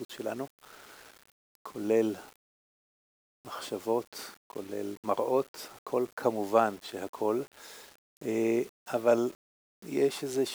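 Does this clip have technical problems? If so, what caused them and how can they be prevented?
Yes: grainy low bit depth without dither runs throughout, likely from rounding to about 7 bits. The error sits only about 25 dB below the signal and, unlike steady dither hiss, follows the sound. Keep a higher bit depth or add dither whenever reducing word length.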